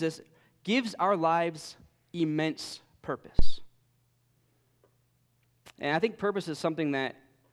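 At 3.39 s a phantom power thump appears: a supply switching on the live input pushes a step through the coupling capacitors, producing a deep thump peaking around -10 dBFS that decays within about 44 ms.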